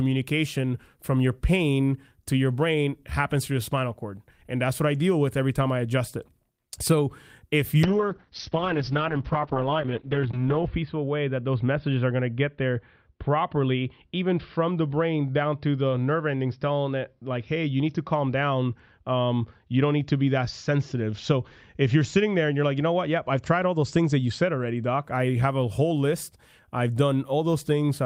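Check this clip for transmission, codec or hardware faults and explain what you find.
One transmission fault: a call bitrate drop from 7.86 to 25.09 s, just before "I have a whole." The encoder starved of bits, pointing to roughly 32 down to 7 kbps. Speech turns rough and muffled, treble cut from 20 kHz to 6 kHz, worst for 2.85 s. It's continuous, without the gaps of packet loss.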